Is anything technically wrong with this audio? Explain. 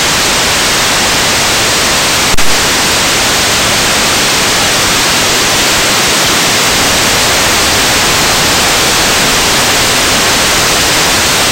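Yes. From 2.34 s to 2.64 s there is a phantom power thump. A supply voltage was switched on or off on a live input, and that sudden DC step passed through the coupling capacitors into the signal path as a single low-frequency pulse. It sounds like a deep, dull thud that peaks at about -1 dBFS, very close to full scale, then dies away with a decay of roughly 67 ms before the audio continues.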